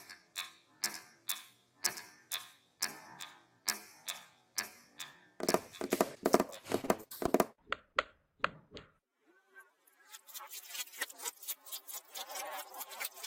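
From 6.81 to 7.30 s, packets repeatedly failed to arrive in time, producing repeated packet loss with a robotic sound. Five gaps, the longest about 23 ms, were patched by extending the preceding audio, so roughly a sixth of that stretch is filler. The sound turns choppy and mechanical, with pieces missing.

At 7.93 to 7.96 s and again at 8.41 to 8.45 s, each a single short burst of packets went missing, a short concealed packet loss. The receiver bridged each hole, about 20 ms of lost audio, by continuing what came before. Each leaves a brief smear or wobble in the sound.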